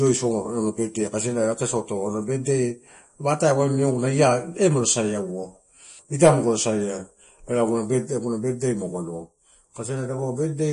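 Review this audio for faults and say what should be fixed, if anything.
MP3 compression damage runs through the whole speech clip and is plainly audible. The treble stops dead at about 10.6 kHz, and there is a watery, swirling quality where quiet frequency detail drops in and out between frames. The likely cause is an encoder starved of bits, which fits a low rate around 40 kbps. On a spectrogram there is a hard horizontal ceiling at 10.6 kHz, with patchy, flickering holes in the weaker bands below it. The waveform shows little sign of it. To prevent it, keep an uncompressed or lossless master and encode only once, at a much higher bitrate.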